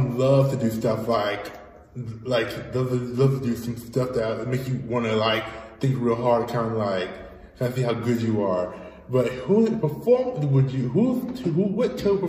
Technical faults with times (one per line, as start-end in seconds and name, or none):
none